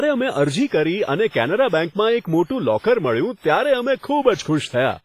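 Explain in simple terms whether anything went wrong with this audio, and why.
Something went wrong throughout the speech: a ringing, washy quality, with a hiss that swells and fades along with the speaking. Nothing is heard above about 15.5 kHz. This is most likely WMA compression, squeezed hard enough that its noise smears over time and quiet detail disappears.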